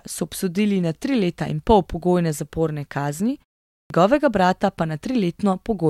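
At 3.79 s, after "pol pogojne zaporne kazni" and a 0.43 s pause, the output device has gone idle and needs about 112 ms to wake. The returning speech therefore loses its opening sounds and bursts abruptly out of silence: a clipped start after a pause.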